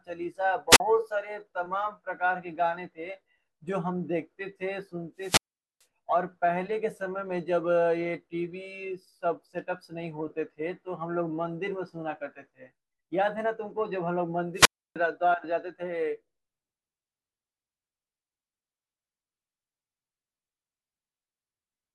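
Wireless microphone squelch dropouts occur at 0.70 to 0.80 s, 5.18 to 5.85 s and 14.54 to 14.96 s. Each time, the radio link from the transmitter weakens until the receiver's squelch gate closes. Hiss swells briefly, the speech drops into near silence, and then it comes back. The mutes last about 41 ms, 436 ms and 306 ms, so the first is a quick flicker and the later two leave much longer holes.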